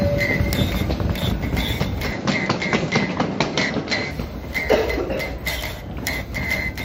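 From 2.12 to 4.11 s the audio narrows and turns duller, with nothing above 7.6 kHz. A faint new background noise sits roughly 40 dB below the signal. The level barely changes, and there is no gap at either switch. The likely cause is the input switched to a poorer device.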